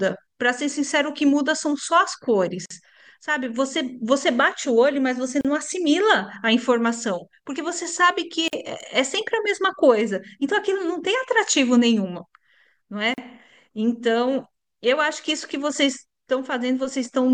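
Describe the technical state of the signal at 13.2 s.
Between 13.14 and 13.18 s the speech cuts to silence for about 41 ms. This is a gap at a join of encoded pieces. Two separately encoded sections were joined untrimmed, leaving encoder delay and end padding. The edges are smeared. Speech resumes where it stopped.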